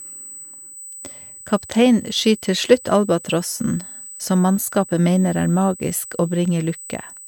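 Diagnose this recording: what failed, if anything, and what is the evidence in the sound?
USB whine: a fixed 8 kHz tone sits under the speech throughout, roughly 20 dB down. USB microframe current is leaking into the analogue stage through shared power or ground.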